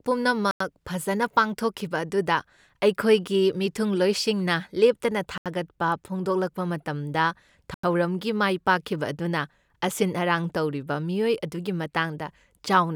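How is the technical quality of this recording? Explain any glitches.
The recording has three dropouts, each a block of digital silence. The speech cuts out at 0.51 to 0.60 s, 5.38 to 5.46 s, and 7.74 to 7.83 s, for roughly 93, 79 and 93 ms. The output buffer likely wasn't filled in time, so zeros went out instead. The two 93 ms gaps fit a 4096-sample buffer. The sound drops to dead silence and back with no fade, so each hole starts and ends abruptly.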